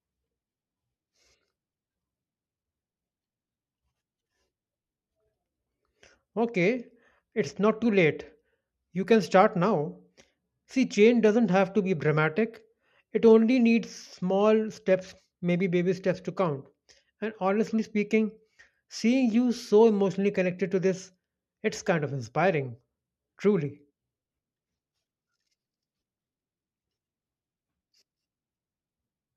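No audible technical faults.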